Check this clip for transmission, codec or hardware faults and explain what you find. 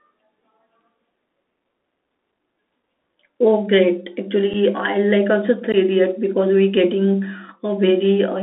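Two faults are present: a Bluetooth CVSD headset codec colours the whole speech clip, and unconcealed Bluetooth headset packet loss punches brief holes at 4.53 s and 5.72 s.

The CVSD headset codec runs throughout. Its one-bit up-or-down tracking cannot keep pace with loud, fast-rising sound, so sibilants turn scratchy over a granular hiss, within a band of roughly 250 Hz to 3.6 kHz, which fits a 64 kbps CVSD link. That hiss and scratchiness set it apart from a clean narrowband telephone filter.

The unconcealed Bluetooth headset packet loss comes at 4.53 s, a gap of 7.5 ms, about one packet, and at 5.72 s, a gap of 15 ms, about two. The missing audio is simply left out, not smoothed over, so each hole has hard, abrupt edges. Unlike a random codec glitch, the gaps are packet-sized and very short.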